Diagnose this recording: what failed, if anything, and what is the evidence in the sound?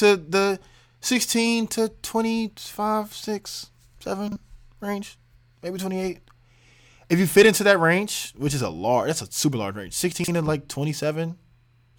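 What failed is chunks out of order, most plausibly at the network stage. The first event runs 4.28 to 4.36 s, just before "range maybe twenty eight". The second runs 10.12 to 10.28 s, between "a super large range" and "and like twenty". Both are brief jumbled stutters. A 40 ms chunk landed one slot late in the first and three slots late in the second. Nothing's missing, just shuffled, leaving three hard seams each time.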